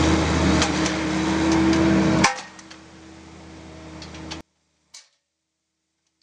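From 4.41 s to 6.23 s the sound falls about 26 dB to a faint residue, likely from one channel inverted, which cancels shared content in mono.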